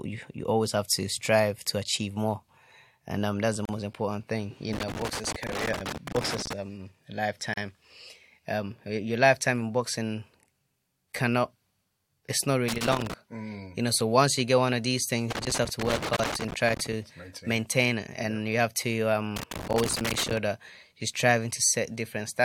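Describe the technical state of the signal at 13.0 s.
At 13.0 s you're right in the middle of a burst of loose connector crackle, running from about 12.68 to 13.14 s, so roughly half a second. What's happening is a worn or dirty contact somewhere in the cable run making and losing connection as it shifts, which chops the speech signal on and off, and any DC sitting on the line turns those breaks into pops. You hear it as a ragged, irregular scratchy crackle over that stretch.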